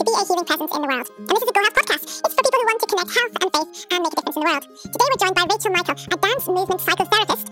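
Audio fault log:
throughout, wrong sample rate: everything runs at exactly twice its proper speed and sits a full octave, 12 semitones, too high, with tempo and pitch shifted together by the same 2.0 ratio. That lockstep is what separates it from time-stretching or pitch-shifting, where one moves without the other. The sound points to material captured at 24 kHz being played out at 48 kHz with no conversion, so each second of audio is crammed into half a second.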